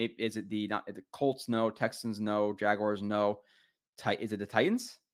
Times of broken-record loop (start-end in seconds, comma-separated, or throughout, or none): none